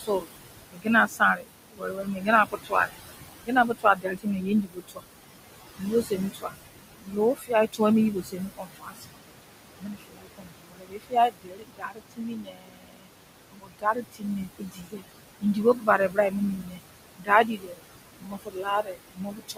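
Noise suppressor artifacts run throughout. Bands judged to be steady noise are pulled down by about 20 dB, so the room noise, about 10 dB below the speech, pumps.

Speech is cut by the noise suppressor from 0.00 to 5.04 s, 5.77 to 9.20 s, and 9.79 s to the end. Quiet speech is mistaken for noise and lowered by up to about 22 dB, affecting roughly 2 s, 1.5 s and 7 s respectively, so those parts sound faint and swallowed.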